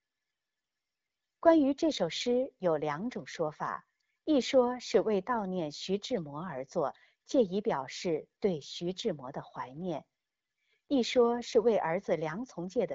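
No technical faults can be heard in this speech recording.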